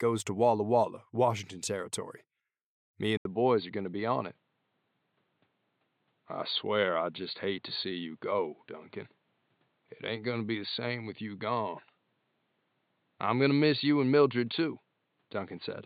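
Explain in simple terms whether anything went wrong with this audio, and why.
Input switched to a poorer device at 3.17 s: an 80 ms gap, then dull sound with nothing above 4.5 kHz, likely a lower-quality microphone taking over.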